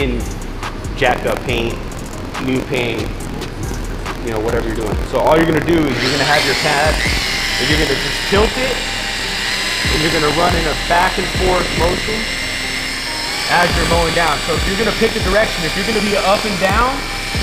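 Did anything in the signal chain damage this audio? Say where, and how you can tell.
Yes. Buffer tearing at the driver/buffer stage runs from 0.93 s to the end: a steady 43.1 Hz robotic rattle on the signal, which fits a 1024-sample buffer. Writer and reader have slipped, so a small slice of each period replays audio about 50 ms stale, hard-joined.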